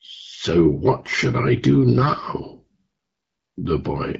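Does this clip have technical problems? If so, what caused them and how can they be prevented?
Yes. AMR bit errors appear between 2.02 and 2.08 s as a brief hoarse, gargly scratch. It spans roughly three frames, where flipped unprotected bits misplaced excitation pulses and skewed fine pitch, gain and spectral values while the checksum still passed. Better radio link margin or stronger channel coding prevents this.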